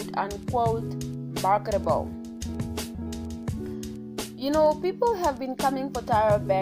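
Nothing stood out as a technical fault on listening.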